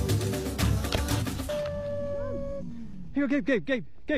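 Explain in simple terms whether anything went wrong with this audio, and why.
Two things went wrong.

The first is damaged data in a compressed stream. It happens twice, from 1.16 to 1.23 s and from 2.56 to 2.62 s. Each time, a short piece of the compressed file is corrupted. The player cannot read those bytes properly. It loses its place and hunts for the next clean starting point. You hear a brief chirp, squawk, click or short hole.

The second is a DC step at 1.91 s. The waveform's resting level suddenly jumps away from zero and stays shifted until the end. That sudden jump is heard as a low thump or click. The sound itself carries on the same. The lasting shift is silent, but it wastes headroom.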